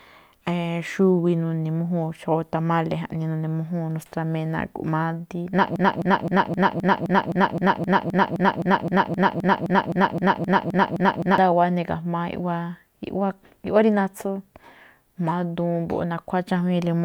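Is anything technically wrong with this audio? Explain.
Yes. From 5.76 to 11.38 s, a 0.26 s speech fragment repeats back to back: a broken-record loop. The likely cause is a stalled stream resending its last piece, and the intended audio is lost.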